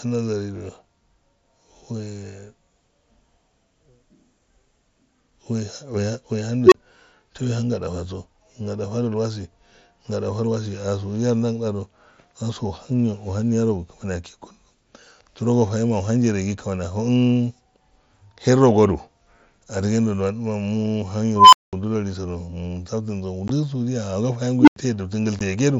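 At 6.66 s an unstable filter, with its recursive feedback running away, swells a tone of around 400 Hz over 58 ms, clips, then drops to 27 ms of silence. The waveform shows a widening envelope that clips, then a flat line. The same fault returns at 21.36 s, around 1 kHz, building for 169 ms and followed by a 203 ms gap, and at 24.60 s, around 300 Hz, building for 74 ms before 88 ms of silence. Each appears on a spectrogram as a bright horizontal line ending in a blank column.

At 23.48 s and 25.39 s, unconcealed Bluetooth headset packet loss leaves 15 ms holes with abrupt edges, consistent with two dropped frames. Each shows as a thin vertical blank slot.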